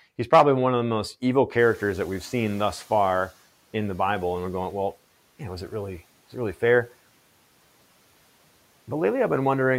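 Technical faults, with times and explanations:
1.58–3.36 s, noise suppressor catching up: room noise jumps by about 19 dB around 1.5 s, and the suppressor's noise estimate lags, so the noise first passes with little reduction. Over 1.78 s it settles down by about 9 dB as the estimate adapts.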